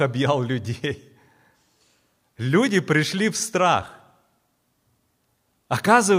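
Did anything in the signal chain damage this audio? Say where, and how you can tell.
No, nothing along the chain seems to have left a mark on this speech recording; I can't point to any stage that damaged it.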